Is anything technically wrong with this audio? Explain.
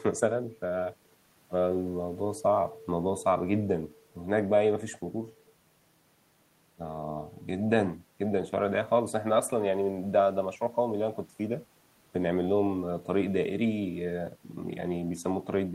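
No, the speech signal holds steady throughout, with no technical problems to be heard.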